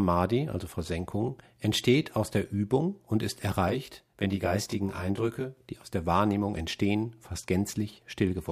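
From 3.69 s to 5.57 s, just after "und ist", the speech takes on channel delay comb filtering. It ends before "die aus der". One channel runs late, here by around 20 ms, and the two are then folded to mono. The shared signal cancels itself at evenly spaced frequencies, the first notch sitting near 30 Hz. With a delay this long, the speech sounds rough and slightly doubled for that stretch.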